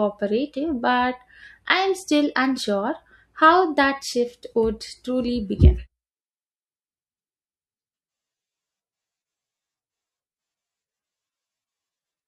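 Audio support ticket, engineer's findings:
No faults found on listening; nothing to escalate.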